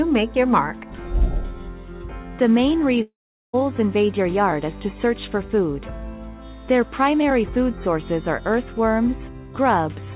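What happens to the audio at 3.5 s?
From 3.02 to 3.55 s, likely a long network dropout: the last sound is stretched into a fading buzz, then silence, shown as a smeared, decaying band before a blank stretch.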